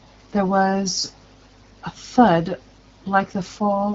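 No technical faults can be heard in this speech clip.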